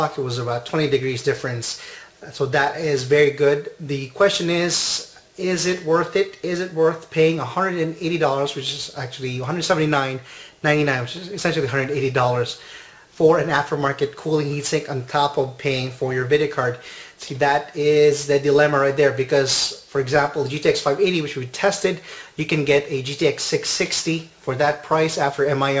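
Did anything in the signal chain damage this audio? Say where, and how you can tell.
Yes, aliasing from a careless sample-rate conversion: throughout, the top end turns gritty and metallic and stacks hard against 8 kHz, which fits an unfiltered drop to 16 kHz folding content back roughly 20 dB down.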